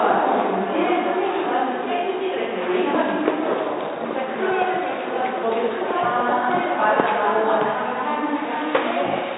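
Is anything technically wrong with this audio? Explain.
No, nothing technically wrong can be heard in this recording of sounds. No faults turn up anywhere in it.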